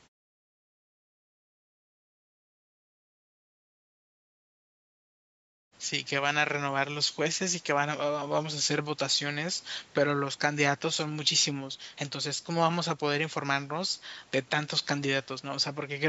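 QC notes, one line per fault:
No faults turned up on this one, just call-style mic processing with nothing above 8 kHz and pauses that quietly fade to silence before the talking picks up again.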